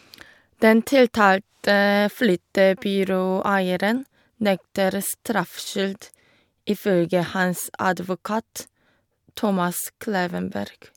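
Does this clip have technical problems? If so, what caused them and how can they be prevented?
No, this clip has no technical problems, so there is nothing to trace to a cause or prevent.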